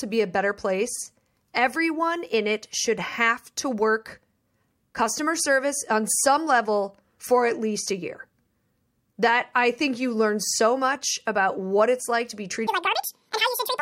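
A speech clip whose final stretch, from 12.67 s to 13.81 s, right after "it's like to be", suddenly races at twice the speed and jumps a full octave higher. It is audio read two samples at a time (double speed): the playback treats each pair of samples as a single frame, as if the data held two channels or wider samples, so only half the expected frames play out.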